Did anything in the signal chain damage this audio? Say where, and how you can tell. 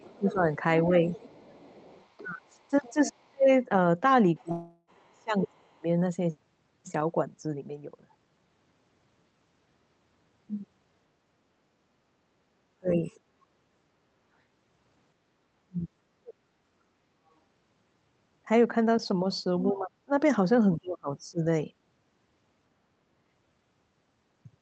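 Yes, and most of it sits in the call processing, with one network hiccup on top. You can hear the other side's voice leaking through from 0 to 5.53 s at about 25 dB below the talker, faintly again at 13.05–13.2 s, and at 19.68–21.19 s around 30 dB down. That's most likely an echo canceller leaving loudspeaker pickup in the mic signal.

The same stage is also producing speech suppressed in double talk. The talker dips by about 10 dB at 0.18–0.48 s, then sinks hard, by roughly 30–40 dB, across 2.2–5.88 s, 12.49–13.02 s, 15.64–16.36 s and 19.63–21.43 s. It partly lines up with the leaked voice, so it's likely the canceller ducking everything it can't separate.

There's also a long network dropout at 4.51–4.9 s. About 0.36 s of audio never arrives. The receiver stretches the last sound into a fading buzz, goes silent for a moment, then jumps ahead with that chunk gone. Likely a burst of lost packets the jitter buffer couldn't cover.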